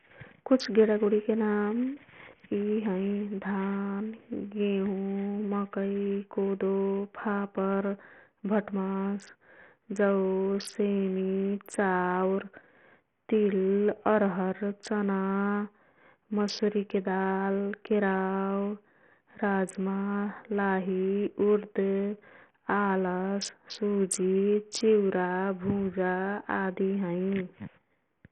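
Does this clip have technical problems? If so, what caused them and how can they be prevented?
Yes. Bluetooth SBC compression damage runs throughout the speech: nothing is heard above 13.6 kHz, the remaining treble flickers, and a gritty, aliased roughness sits on the sound. The likely cause is the SBC codec at a very small bit pool, which fits a bitrate of around 48 kbps. SBC divides the signal into a few wide sub-bands without a hearing model, so the weak top bands get no bits and the rest are coarsely quantised. To prevent this, record over a wired connection or use a higher SBC bit pool or a better Bluetooth codec.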